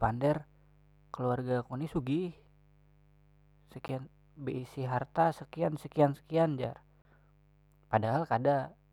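A rectifier, dimmer or unshielded line has let switching spikes from the 50 Hz mains into this speech recording. That produces mains buzz, a steady, raspy tone rich in harmonics, sitting roughly 35 dB below the speech for the whole clip. Separately, the output buffer was likely twice left unfilled, most plausibly because the software missed its deadline, so blocks of digital silence replace the audio. At 3.88 s a 10 ms dropout is heard as a tick or dip, and from 7.02 to 7.05 s a 30 ms hole cuts in and out abruptly.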